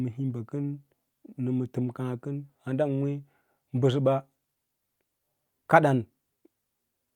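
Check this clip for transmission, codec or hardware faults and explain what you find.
No faults turn up in the speech signal, and nothing audible points to a problem in how it was captured, encoded or sent.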